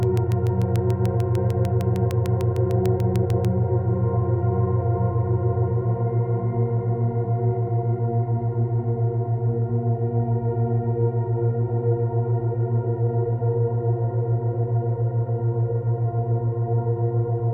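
A train of clicks runs from 0.03 to 3.46 s, about twenty sharp ticks at a regular 6.7 per second. They rise roughly 10 dB above the sound and are audible in quiet gaps too. Their closely matching shape likely points to interference from nearby equipment or a faulty connection or power supply.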